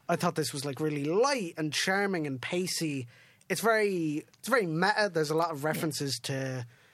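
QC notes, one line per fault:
Nothing stood out on listening to this speech.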